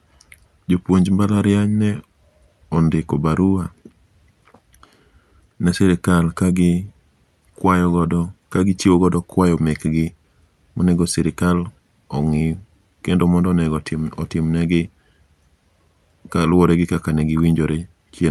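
No technical faults can be heard in this speech, which carries the usual coding character of a call path and tops out at 12 kHz, consistent with an Opus stream at around 64 kbps.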